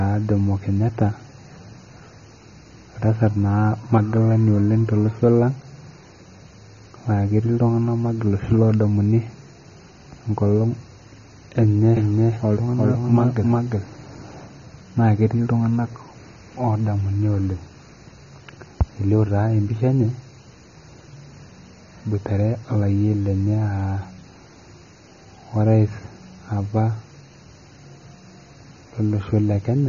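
From the start, the speech sounds dull and smeared, with nothing above about 6.9 kHz and a watery, fizzy edge on sibilants. That's AAC compression, most likely AAC-LC at a low rate like 24 kbps, quantising the spectrum hard and chopping off the top.

Between 11.97 and 14.47 s a second copy of the audio runs along roughly 400 ms behind, about as loud as the original, dry, and cutting in and out abruptly. That's a doubled audio track, likely a second, slower capture path mixed in.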